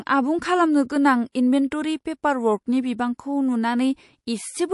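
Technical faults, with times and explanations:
Throughout: MP3 compression. A bit-starved encoder, likely MP3 at a rate consistent with about 48 kbps, zeroes weak frequency lines that flicker on and off between frames, so the speech sounds plainly watery and swirly, with chirpy s sounds.
1.32 to 1.35 s: pre-echo. The encoder stayed on a long transform block, which fits a window of about 48 ms, rather than switching to short blocks, so quantisation noise sized for a sharp onset spreads about 29 ms ahead of it, rising about 20 dB as a brief hiss before a softened, smeared attack.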